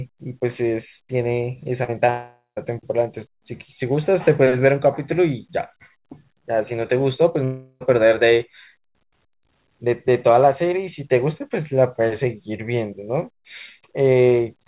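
Around 1.84 to 1.90 s there's a bit of short concealed packet loss: about 40 ms of audio didn't reach the decoder in time, so the receiver stretched out the last sound and blended back in. You hear it as a quick smear. Another 20 ms patch follows at 2.06 to 2.10 s.

Right after that, from 2.10 to 2.58 s, the sound carries on as a fading buzz or hiss and then drops to silence for roughly the last 140 ms before the real audio returns with a chunk missing. It's likely a long network dropout, with nearly half a second never arriving. The same thing happens again at 7.44 to 7.82 s, where about 360 ms is papered over by a decaying fill that only just reaches silence before the audio picks up again.

Throughout, nothing sits above 4 kHz, which fits the narrowband G.711 A-law call path.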